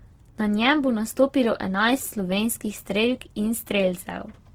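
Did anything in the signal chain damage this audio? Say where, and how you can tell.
Yes, at the codec: the speech is grainy and rough throughout, its bands noise-filled yet full-width, likely Opus compression in CELT mode at a rate near 16 kbps.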